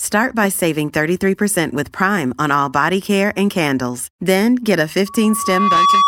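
From 5.06 s to the end of the speech, loudspeaker feedback squeal sets in: the microphone re-captures its own loudspeaker, and loop gain above unity at 1.1 kHz lets that tone swell over roughly 0.7 s into a steady squeal, ending about 5 dB above the speech.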